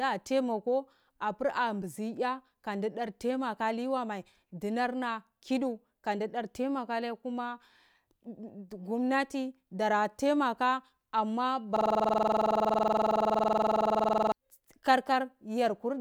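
At 11.76 s the audio locks into a system hang loop until 14.32 s. Something froze while the hardware kept replaying one buffer, so a 46 ms slice repeats dozens of times, a 21.5 Hz buzz that fits a 2048-sample buffer.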